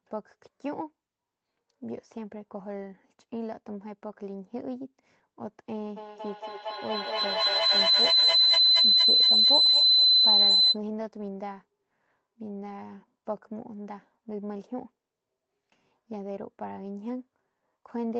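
From 5.97 to 10.8 s a feedback howl builds: the microphone-to-loudspeaker loop gains level each trip, so a tone around 4 kHz swells to about 13 dB above the speech, the loop coming round roughly every fifth of a second. Unlike echo, the repeats grow rather than fade.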